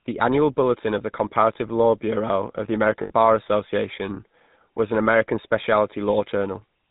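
From start to finish the speech carries the plainly audible damage of the GSM full-rate codec, and the character points to the 13 kbps full-rate coder. This codec rebuilds the voice from a vocal-tract filter excited by a regular pulse train that keeps only one excitation sample in three. That sparse excitation gives the voice a buzzy, gravelly roughness. On a spectrogram nothing appears above 4 kHz, and the harmonics look smeared and grainy rather than cleanly striped.

From 3.02 to 3.12 s there are lost GSM frames. The decoder covers the gap by reusing the parameters of the last good frame. About 80 ms is concealed this way, which fits four 20 ms frames. The sound hangs as a rough, metallic ring instead of moving on. On a spectrogram the formant pattern freezes into flat horizontal bands before normal speech resumes.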